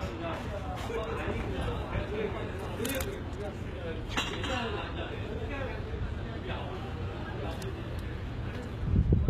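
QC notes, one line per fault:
Throughout, HE-AAC compression: the top end sounds bright but synthetic, with gritty, metallic treble and obvious coding damage, and nothing at all above about 14.9 kHz. This is likely HE-AAC at a very low rate, consistent with roughly 20 kbps. Only the lower spectrum is truly coded. The treble is rebuilt by copying lower bands upward under a coarse envelope, so its harmonics fail to line up with those below the crossover.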